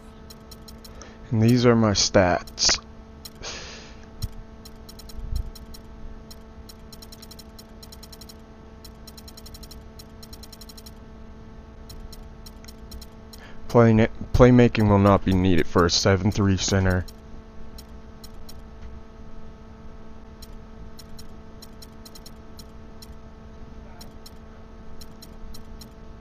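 At about 20.52 s the quality drops suddenly and stays down right through to the end. That's an adaptive stream falling back to a lower bitrate: the connection slowed, so the player switched to a leaner version without any gap. The sound picks up more codec artefacts. The step sounds like roughly half the bitrate, something like moving from 64 to 32 kbit/s.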